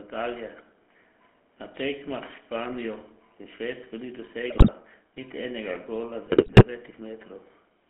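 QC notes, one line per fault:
throughout: GSM full-rate codec. The sound has a plainly audible buzzy, gravelly roughness and a narrow telephone band of roughly 200 Hz to 3.4 kHz. The codec models the vocal tract and drives it with a sparse train of regularly spaced pulses, keeping only a fraction of the excitation. That coarse excitation causes the buzz, and nothing above 4 kHz survives. This fits the 13 kbps full-rate coder.
4.5–4.7 s and 6.26–6.64 s: GSM bit errors. Squawks, pops and gargling break up the sound just before "niti enega gola" and again just after it. The second burst is longer. Flipped bits reached the decoder and corrupted its filter, pitch and gain values, so the spectrum bends and the level jumps frame after frame while each burst lasts. The damage points to an error rate of roughly 3.6%, about ten frames in the first burst and seventeen in the second.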